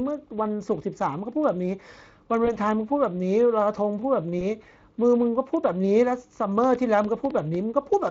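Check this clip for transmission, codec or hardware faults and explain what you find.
Three kinds of fault are audible: codec damage across the whole clip, two brief concealed packet losses, and a burst of clicks near the end.

Speex codec damage runs throughout the speech and is plainly audible: hoarse and noisy. The sound points to a bitrate around 20 kbps, where the CELP excitation gets too few bits. The roughness sits in the voice itself rather than the swirling, watery artefacts of transform codecs.

VoIP packet loss concealed by the speech codec occurs at 2.45 to 2.56 s and 4.39 to 4.43 s. Each fits one lost 20 ms frame. The decoder extended the previous pitch and filter with falling gain, giving a short buzzy or noisy smear that recovers gradually rather than a clean silent gap.

A train of clicks runs from 6.64 to 8.08 s: about seven sharp, similar pulses at an irregular pace near 4.9 per second, well above the speech level. 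Unlike the concealment smears, they are abrupt and sit over pauses too. Interference or a struggling interface is the likely cause.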